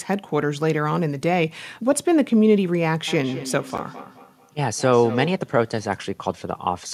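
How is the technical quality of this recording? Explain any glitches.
Two faults overlap in the middle of the recording.

From 3.08 to 5.48 s there is feedback echo between two devices. A second device on the call replays this audio, and the microphone picks it up again, beyond its echo canceller's reach. The speech returns roughly every fifth of a second, thinner and ringing, peaking about 13 dB below the speech.

At 3.78 s there is a block of digital silence. 10 ms of samples became zeros. The sound drops out and returns abruptly, heard as a brief tick inside the echoing stretch.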